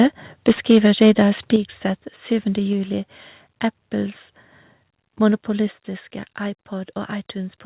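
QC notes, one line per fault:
0.48–1.39 s, microphone overload: the loudest syllables turn harsh and crackly, their peaks flattened against a hard ceiling. The input was likely driven about 9 dB past what the converter could take, so around four percent of samples lost their tops.
0.55, 1.56, 2.73 and 5.67 s, microphone volume stepped down: voice and background drop abruptly together, by about 2, 7, 2 and 4 dB. This is likely the call software reacting to the overloaded peaks by cutting the input gain in single steps.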